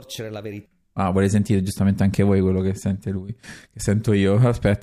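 No technical faults are audible anywhere in the speech.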